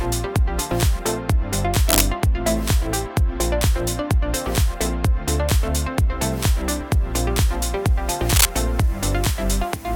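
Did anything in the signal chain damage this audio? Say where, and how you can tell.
Yes, in the analogue wiring. Two short bursts of cable scratch noise sit over the sound, from 1.87 to 2.02 s and from 8.29 to 8.46 s. Each is dense and uneven, about as loud as the audio. A worn, moving connector is the likely cause.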